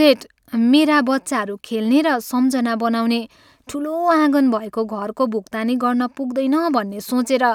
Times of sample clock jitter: 4.48-7.15

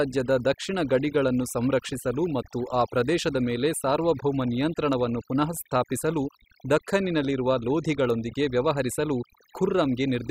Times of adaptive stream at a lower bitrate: none

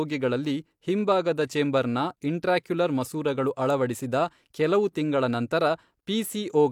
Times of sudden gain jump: none

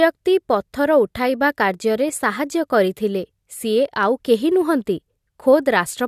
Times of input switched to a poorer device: none

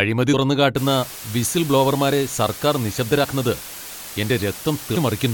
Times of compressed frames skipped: 0.33, 3.23-3.25

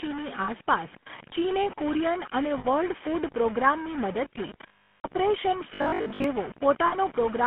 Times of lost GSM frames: 0.44-0.50, 2.58-2.66, 4.68-5.06, 6.86-6.96

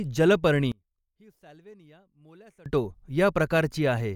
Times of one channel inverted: 0.72-2.66

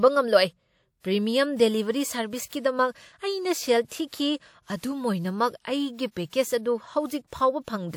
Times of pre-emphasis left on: none

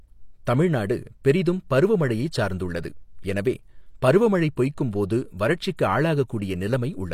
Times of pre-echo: 5.77

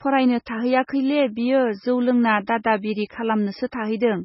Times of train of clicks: none

